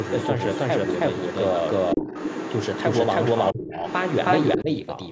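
A second, slower capture path or an edit holding two copies out of step has likely left a doubled audio track running through the whole of this speech recording: one full-band copy trails the original by roughly a third of a second at close to the same loudness, with no decay or room colour. Every syllable therefore arrives twice.

An echo canceller that did not fully remove the far end's loudspeaker playback from the microphone is the likely reason the other side's voice is leaking through from the start to about 4.58 s. That second voice sits only a few decibels below the main talker and competes with it through most of the clip.

The same canceller, likely confused by both sides talking at once, also produced speech suppressed in double talk. The main voice dips by around 10 dB from 1.95 to 2.08 s, drops much more deeply, by roughly 25 dB, from 3.52 to 3.82 s, and dips again by around 10 dB from 4.57 to 4.7 s, so it briefly fades or nearly vanishes in those stretches. 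The call's microphone processing limits the audio to nothing above 8 kHz.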